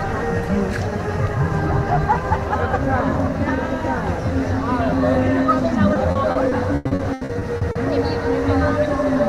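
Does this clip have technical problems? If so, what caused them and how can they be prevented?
Yes. From 5.93 to 7.77 s there is repeated packet loss (robotic sound). Thirteen short gaps, the longest 100 ms, are each filled by extending the preceding audio, so nearly 30% of that stretch is concealed and sounds choppy. A more stable network path with a larger jitter buffer or forward error correction would prevent it.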